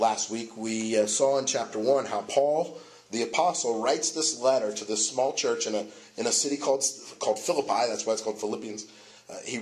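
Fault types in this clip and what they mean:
No fault types can be heard in this clip.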